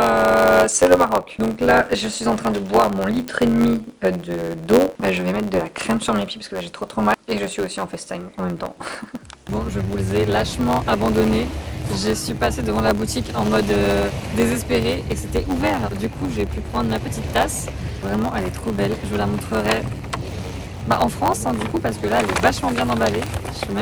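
From start to finish the audio carries a block size mismatch (truncated). The end of every block is discarded, which fits 512-sample blocks written into a shorter read, causing a steady buzz near 91.9 Hz while the sound runs 1.07 times fast at near-normal pitch, unlike resampling errors, which shift pitch.

At 3.28 s and again at 23.27 s a bit error spike gives a single sharp, broadband tick. Each is one isolated jump of one to three samples and straight back, unrelated to the signal and not periodic, so it can't be mistaken for the regular block-rate buzz.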